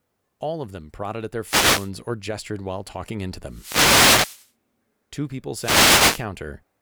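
Wireless microphone noise hits occur three times. They run from 1.43 to 1.91 s, after "them prodded at their"; from 3.46 to 4.51 s, after "gestured while talking into"; and from 5.55 to 6.27 s. Each time, radio reflections cancel and the FM signal fades. Receiver noise rises as a swish of static.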